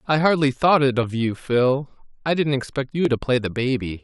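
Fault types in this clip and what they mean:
Clock drift buffer slips: clicks in the speech recur steadily about every 1.01 s, from 1.03 s to 3.05 s, roughly three in all. The even spacing separates this from random dropouts, and it is likely two clocks disagreeing by several hundred ppm, each slip dropping or repeating a few dozen samples.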